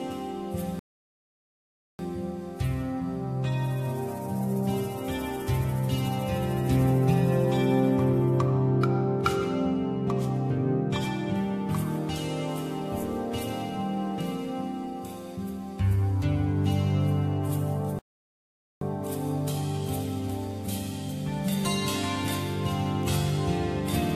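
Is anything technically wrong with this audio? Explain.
Yes, there are two rebuffering stalls: at 0.79 s, silence for 1.2 s, and at 17.99 s, about 0.82 s of silence. The player ran dry of downloaded audio and waited for more, so sound drops out, then picks up exactly where it left off. Nothing's missing, just extra time.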